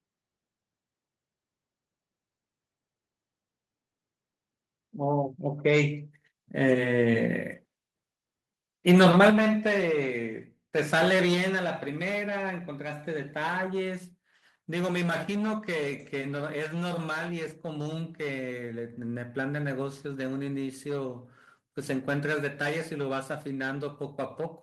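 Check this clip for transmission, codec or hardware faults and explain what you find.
There's one kind of fault here, a microphone volume stepped down, and it happens twice in this speech clip. At 9.3 s the whole level drops abruptly by about 6 dB, then at 11.34 s it steps down again by about 3 dB. The likely cause is the call software deciding the mic was running too hot and cutting the device's input volume in single jumps, so the voice and the room sound behind it fall together.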